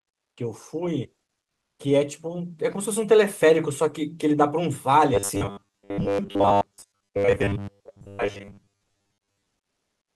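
From 1.43 to 1.79 s, a stretch of about 360 ms, the real background drops out and is replaced by comfort noise: a flat, featureless hiss about 13 dB quieter than the ambience around it, sitting roughly 59 dB below the loudest passages. The cause is likely discontinuous transmission, as in Opus DTX, where the sender pauses during a gap in the speech and the receiver fills the silence with synthetic noise until real audio resumes.

From 5.14 to 9.48 s the speech takes on a robotic sound from repeated short buffers. A rigid, metallic buzz at 100 Hz loosely tracks the speech. The likely cause is late-arriving audio, with the receiver looping the most recent fragment to cover the gaps. A 100 Hz buzz fits a repeated 10 ms buffer, and most of the stretch, around 70 percent, appears to be repeated material rather than fresh signal.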